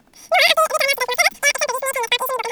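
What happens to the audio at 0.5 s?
At 0.5 s, as throughout, a wrong sample rate plays speech three times too fast and about 19 semitones high, fitting 16 kHz audio played at 48 kHz; tempo and pitch rise together, unlike a pitch shift.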